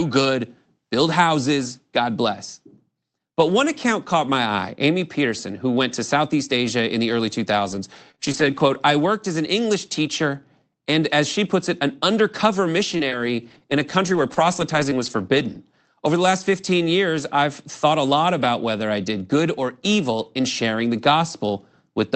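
Between 7.71 and 8.92 s, and again from 12.94 to 15.56 s, the speech has scattered short gaps: around four tiny dropouts in the first stretch and about five in the second, none longer than a few tens of milliseconds. The receiver papers over each hole by stretching the last bit of sound, so you hear brief ticks and small smears rather than silence. It all sits on top of a call codec whose top end fits roughly an 8 kHz bandwidth.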